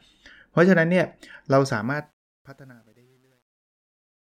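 Speech with truncation distortion on the fade-out from about 1.8 s: from 1.76 s it turns gritty, worst from 2.39 s to the end, consistent with a roughly 10-bit undithered gain stage.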